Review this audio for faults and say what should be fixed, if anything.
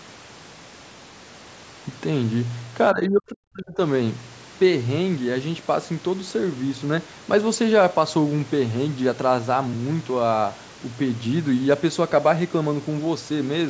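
From 2.93 to 3.8 s the speech sinks sharply, by around 40 dB at its deepest, for roughly a second. This is most likely speech suppressed in double talk: with both ends talking, the echo canceller could not separate this talker from loudspeaker echo and attenuated everything. Unlike a packet-loss dropout, the level dips rather than snapping to silence. The 8 kHz band limit comes from normal call microphone processing. Tuning the echo canceller's double-talk detection to favour near-end speech would prevent this.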